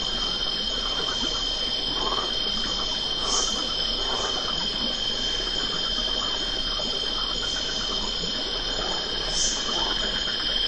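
Throughout the clip, the audio runs slow and sits low, at about 0.73 times its proper speed with pitch lowered by 5.55 semitones, a little over a perfect fourth. Tempo and pitch shift together, which marks a wrong sample rate: the samples are being played back slower than they were captured, with no conversion between the two rates. The ratio fits material recorded at 44.1 kHz and played at 32 kHz.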